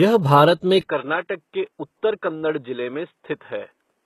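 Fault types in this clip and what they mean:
HE-AAC compression: Throughout the clip the treble sounds synthetic rather than natural, with sibilants coming across gritty or lispy and nothing audible above about 12.3 kHz. This points to a likely HE-AAC encoding at a low rate, fitting something around 16 kbps with heavy codec damage. The upper band is not carried directly but rebuilt by copying lower bands upward under a coarse envelope, so the upper harmonics fail to line up with the real ones below the crossover.
Input switched to a poorer device: Right after "भारत में", at 0.81 s, the sound abruptly turns dull and boxy, drops by roughly 10 dB, and stays that way to the end, with no gap at the change. Above about 3.8 kHz nothing remains, and a new noise floor sits roughly 50 dB under the signal. This is likely the recording input jumping mid-take to a narrower-band microphone or a headset call profile with its own tone and noise.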